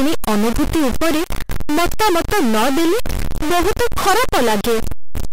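A speech recording carries harsh, buzzy distortion from start to finish, likely a stuck bit in the data path. The error steps sit at about -15 dBFS, so even pauses fill with loud noise. The waveform shows jagged offset steps, and the spectrogram shows broadband smearing that never clears.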